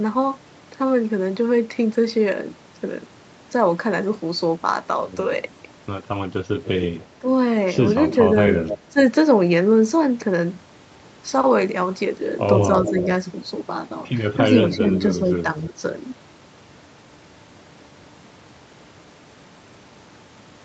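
An echo canceller likely let loudspeaker sound leak back: from 6.64 to 7.05 s a faint copy about 15 dB below the main sound trails it by 287 ms, an echo leak. At 7.19 s, while both sides overlap, the same canceller likely mistakes the talker for echo, and speech suppressed in double talk dips the level by roughly 10 dB. From 8.09 to 8.78 s the echo returns, about 10 dB down at 287 ms delay, and from 8.48 to 8.98 s the overlapping speech is pulled down by around 15 dB. From 12.77 to 13.06 s the echo sits about 10 dB down at 310 ms, with a slight dip of some 5 dB at 12.9 s. From 14.73 to 15.74 s a longer echo stretch at 310 ms delay coincides with suppression from 14.79 to 15.83 s, where the speech drops roughly 10 dB.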